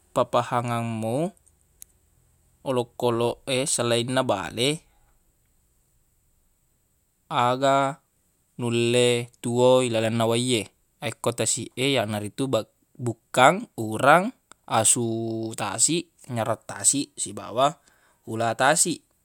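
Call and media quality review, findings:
No audible faults found in the speech; nothing to escalate.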